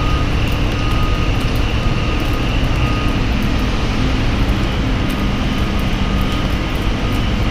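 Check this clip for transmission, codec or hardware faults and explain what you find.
No transmission, codec or hardware fault can be heard anywhere in this sound recording, and the signal holds steady throughout.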